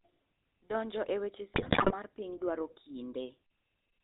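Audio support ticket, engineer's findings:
Buzzy, gravelly roughness throughout, nothing audible above 4 kHz. Component: GSM full-rate codec. Vocal-tract model driven by regular pulses with only every third excitation sample kept, so the fine excitation detail is lost and the top band is cut. Damage plainly audible, which fits 13 kbps full-rate coding.

Squawks, pops and gargling from 1.54 to 1.95 s, between "e weche" and "mar piny dwaro". Component: GSM bit errors on a weak link. Corrupted filter, pitch and gain values bend the spectrum and spike the level frame by frame. Span fits roughly 20 codec frames, at a heavy error rate of a few percent.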